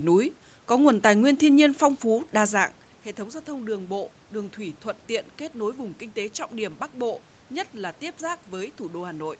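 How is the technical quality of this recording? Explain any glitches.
There are no technical glitches in this speech recording. What you hear is a normal call path: nothing above 8 kHz, consistent with wideband call coding, plus some room noise and a level change around 2.5 s as the talker shifts position at the microphone.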